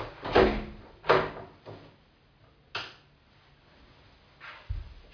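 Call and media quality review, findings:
No call or media quality faults found in the audio.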